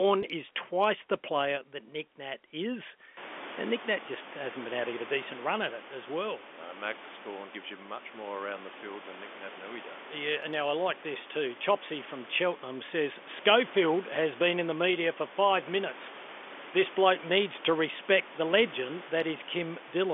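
No faults: room noise steps up by about 24 dB around 3 s and then sits about 20 dB under the speech, which comes through a telephone band of roughly 250 Hz to 3.5 kHz with at most faint coding noise.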